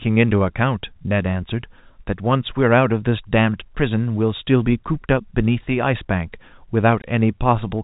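At 7.02 to 7.04 s, near the end of the speech, a short hole of about 20 ms opens, which fits a single lost packet. This is packet loss filled with silence: the receiver had nothing to play for that stretch and inserted silence, so the sound stops dead and restarts with hard edges. Concealment would smear or repeat the previous sound across the gap, but here it is empty. Through the G.711 telephone band, the sound stays narrow, under 4 kHz.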